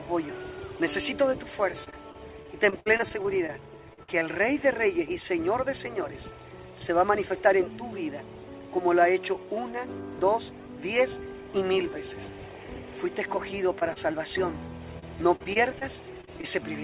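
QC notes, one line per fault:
1.84–4.23 s, repeated packet loss (robotic sound): holes follow one another, up to 59 ms each, each patched by repeating the last sound, so the audio turns choppy with pieces missing rather than briefly smeared.
13.79–13.83 s, 13.93–13.98 s and 14.12–14.15 s, short concealed packet loss: three isolated gaps that fit single 20 ms packets, each filled by extending the preceding sound. They are heard as brief smears or wobbles.
14.99–16.45 s, repeated packet loss (robotic sound): a second dense run of gaps, up to 40 ms each, fills about an eighth of the stretch with continued sound. It sounds choppy with pieces missing, and stays within the 4 kHz band of the G.711 call path.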